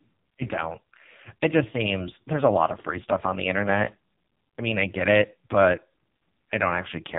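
From start to finish the speech carries the sound of the AMR narrowband mobile codec at a very low rate, which fits one of the lowest AMR-NB modes, near 5.15 kbps. The voice is rebuilt from a vocal-tract model and a sparse pulse excitation, so it comes out heavily buzzy, thin and synthetic. On a spectrogram, everything stops at a flat ceiling near 3.8 kHz, pointing to 8 kHz sampling, with smeared, blocky harmonics beneath it.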